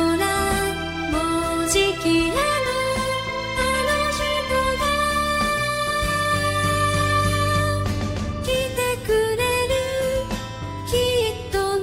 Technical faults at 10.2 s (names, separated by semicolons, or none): none